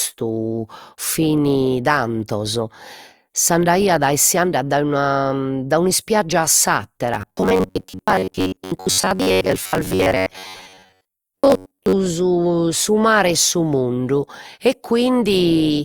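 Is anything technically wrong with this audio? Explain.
Yes. From 7.14 to 11.93 s the speech turns into robotic sound from repeated short buffers. The likely cause is audio arriving too slowly, so playback loops a fragment of roughly 10.7 ms, with most of the real signal skipped. That loop imposes a rigid 93.8 Hz metallic buzz that loosely tracks the speech. A spectrogram shows evenly spaced horizontal harmonics at multiples of 93.8 Hz. The waveform shows identical short cycles repeating.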